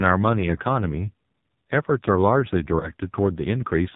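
From start to finish the speech carries the AMR narrowband mobile codec, and the damage is heavy. Nothing above 4 kHz survives, and the voice turns buzzy and synthetic, which points to a low AMR-NB mode of about 5.9 kbps. The encoder rebuilds speech from a vocal-tract model driven by sparse pulses. That explains the buzz, and it is what separates this from a plain low-pass filter, which would only dull the sound without making it artificial.

Between 0.40 and 0.54 s there is a short lost AMR speech frame event: a brief dip or warble. A similar one follows at 2.80 to 2.90 s. Each fits a single lost 20 ms frame. The decoder covered the gap by reusing the last good pitch and vocal-tract settings at falling gain. Because of that, the sound smears and wobbles rather than cutting to hard silence or clicking the way a raw packet dropout would, and it comes back weak or rough for a moment.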